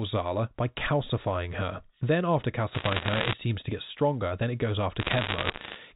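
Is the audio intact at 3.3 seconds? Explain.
No, 3.3 s sits right at the tail of a burst of bit errors on a digital phone line running from 2.74 to 3.33 s. Roughly one or two bits in a hundred flip, each spoiling a sample, so sharp ticks crackle over the speech.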